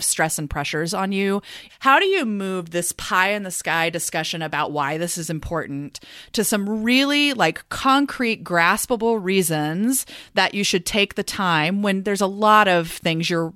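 No technical faults are audible.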